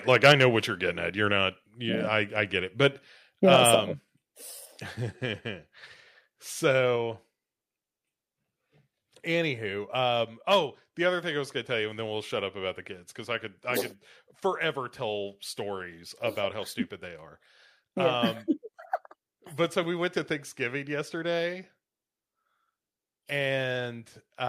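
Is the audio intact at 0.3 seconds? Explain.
No. Around 0.3 s the speech is running into microphone overload, from about 0.10 to 0.43 s. The loudest peaks there go roughly 7 dB past the converter's limit, so their tops are sheared flat, likely because the microphone's input volume was set too high for the converter. Only a small fraction of the waveform gets cut, but you hear it as a gritty, crackly edge on the strongest syllables rather than clean loudness.

Partway through that, at 0.32 s, there's a microphone volume stepped down event: speech and background both drop by about 4 dB in a single jump. That's likely the call software spotting the clipped peaks and pulling the device's input volume down in one move. It comes across as the level sagging abruptly partway through the distorted stretch, not a smooth fade.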